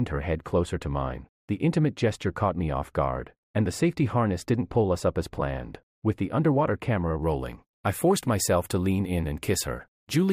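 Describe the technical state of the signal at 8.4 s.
At 8.4 s the signal is intact, with no dropout, distortion, glitch or other technical fault to be heard.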